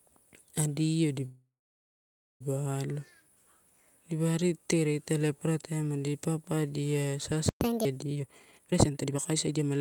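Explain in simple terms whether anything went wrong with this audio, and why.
Yes, four things went wrong.

From 1.25 to 2.42 s there is a call audio freeze. Network packets were likely held up, and the receiver's jitter buffer ran empty. It stretched the last sound into a fading buzz or hiss, then nearly a second of silence. When the packets arrived, the audio picked up exactly where it had stopped, so nothing is missing, just delayed.

At 7.49 s, right after "adi papadia", a playback stall occurs. The player likely ran short of data, so the output goes silent for about 120 ms before the sound continues.

From 7.61 to 7.85 s comes catch-up at higher speed. To win back the time lost in the stall, the player runs its backlog at 1.5 times normal speed. For that quarter second everything sounds quicker and noticeably higher in pitch, then it returns to normal.

From 8.15 to 9.79 s there is a jitter buffer speed-up. 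The receiver had built up more stored audio than it wanted, so it trimmed many tiny slices to cut the delay. The sound plays at about 164% speed but keeps its normal pitch, so it comes across as rushed, and roughly a second of audio is dropped.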